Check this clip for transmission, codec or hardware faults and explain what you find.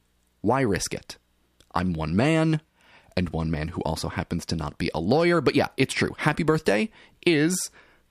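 No faults turn up anywhere in this speech recording. There is nothing to report for any part of it.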